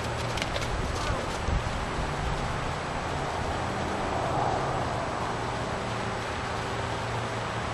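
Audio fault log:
5.26 to 7.66 s: a train of clicks, around 30 sharp ticks at an uneven 11.7 per second, poking out about 10 dB above the sound, likely from nearby interference.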